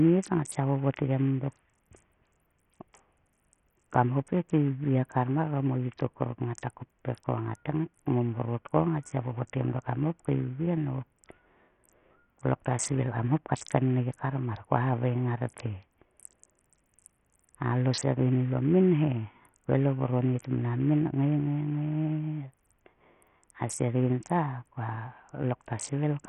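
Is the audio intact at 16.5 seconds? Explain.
No. At 16.5 s, as throughout, Bluetooth SBC compression likely starves the top sub-bands of bits, leaving nothing above 15.5 kHz and a gritty, coarsely quantised texture consistent with a very low bitrate.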